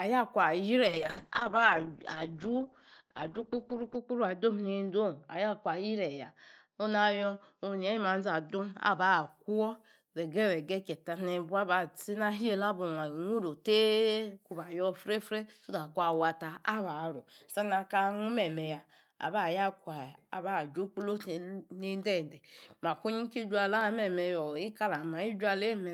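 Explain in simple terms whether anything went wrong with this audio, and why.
From about 0.88 s to 9.35 s the speech turns rough and muffled, as if heard through a wall, with a watery edge; it is at its worst for about 3 seconds within that stretch. This is a call bitrate drop. The connection seemed to slow, so the call sent far less data about the sound. With so little to work with, detail was lost and everything above about 6 kHz was cut away, taking the crispness with it.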